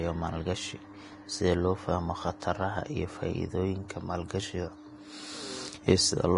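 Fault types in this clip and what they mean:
Vorbis compression: throughout the speech, nothing survives above 10.6 kHz, and the remaining treble sounds hissy and grainy, with sibilants smeared into noise and consonant onsets blurred. This is likely low-bitrate Vorbis coding, which keeps a smooth outline of the spectrum but quantises the upper bands so coarsely that their fine detail is replaced by noise of similar energy. The heavy damage fits a rate of around 31 kbps.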